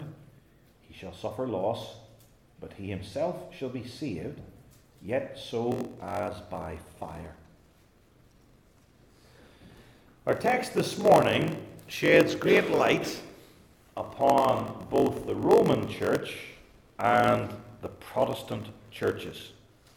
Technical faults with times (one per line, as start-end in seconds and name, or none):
5.70-19.96 block size mismatch (padded)